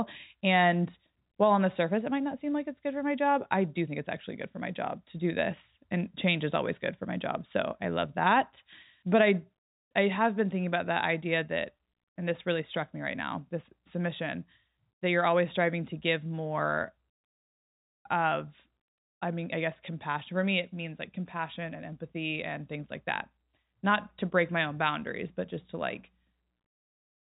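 Speech carried over G.711 telephone coding, with its top end stopping at about 3.8 kHz as that narrowband path would give, shows no technical faults.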